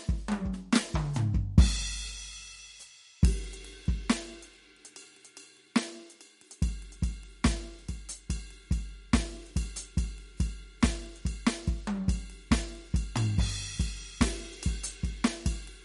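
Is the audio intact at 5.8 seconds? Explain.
No. At 5.8 seconds the music carries damage that runs through the whole clip, most likely MP3 compression. Nothing is heard above 11.2 kHz, so the treble is cut off at a fixed point. Short of bits, the encoder drops weak frequency lines, and they flicker on and off between frames. That gives a watery, swirling texture, and the damage is plainly audible. It points to a low bitrate, around 49 kbps.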